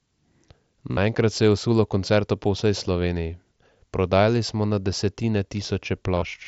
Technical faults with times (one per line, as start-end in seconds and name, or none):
0.91-0.97 concealed Bluetooth headset packet loss
6.17-6.22 concealed Bluetooth headset packet loss